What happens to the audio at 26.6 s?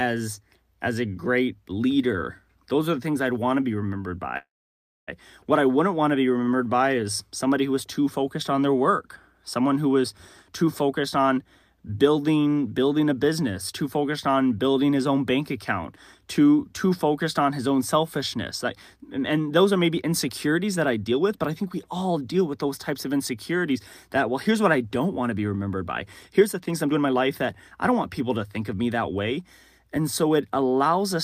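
At 26.6 s the speech is inside a jitter buffer speed-up that runs from 26.31 to 27.14 s. The receiver's buffer had built up more audio than its target, so it trimmed short slices of one or a few pitch periods again and again, cutting roughly a fifth of a second in total. Playback runs at about 125% speed while the pitch stays unchanged, so this stretch sounds noticeably hurried.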